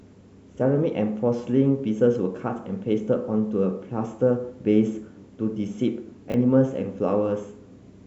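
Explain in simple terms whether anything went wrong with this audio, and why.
Something did go wrong, briefly, from 6.30 to 6.34 seconds. This is a fault called chunks out of order. Audio is handled in small pieces, here 20 milliseconds each. One piece came one step late, so it played after the piece meant to follow it. Nothing is missing. But the order is swapped, so the speech sounds jumbled for a split second. There are three rough joins between pieces.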